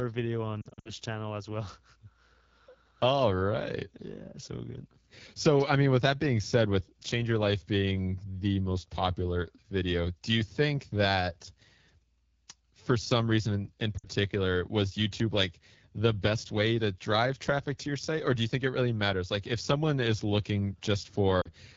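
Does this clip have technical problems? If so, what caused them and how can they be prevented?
Yes. The whole recording runs through the AMR wideband (HD Voice) codec at 8.85 kbit/s, the second-lowest AMR-WB rate. Speech is modelled with pulse excitation only up to 6.4 kHz, with shaped noise above that, and at this rate the damage is plainly audible as a rough, raspy texture. A call setup that negotiates 12.65 kbit/s or higher would prevent this.

There are also lost AMR speech frames at three points. From 0.62 to 0.93 s, just before "channel as well", about 160 ms of audio is missing in gaps spread over 240 ms, the longest lasting 60 ms. From 13.97 to 14.06 s, just after "some reason in in", about 60 ms is missing, and from 21.41 to 21.51 s about 40 ms. Each time the decoder repeats its last pitch and vocal tract settings at falling gain, which drops the sound to near silence within two frames before the voice returns weakly. 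Better radio coverage or stronger channel protection would prevent the frame errors.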